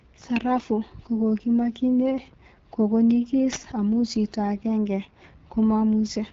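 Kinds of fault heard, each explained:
AMR wideband (HD Voice) codec: The speech comes through rough and raspy, with nothing above about 7.4 kHz. That points to the codec's second-lowest rate, 8.85 kbit/s. Unlike narrowband telephone coding, which stops near 3.4 kHz, the sibilants keep a thin, noise-filled top band.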